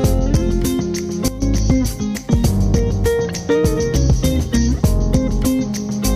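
A sudden gain jump at 1.28 s drops the audio and its background noise together by about 12 dB until 1.42 s, likely an unramped digital gain change.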